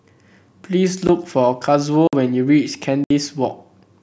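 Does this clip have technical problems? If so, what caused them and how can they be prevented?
Yes: blocks of digital silence cut the speech at 1.07 s, 2.08–2.13 s and 3.04–3.10 s. The 16 ms and 64 ms holes fit 256- and 1024-sample buffers the program failed to fill in time. Larger buffers or higher processing priority prevent this.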